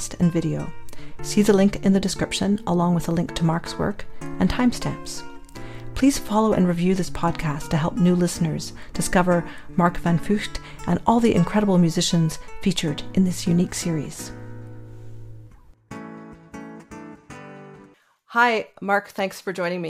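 No technical faults are audible.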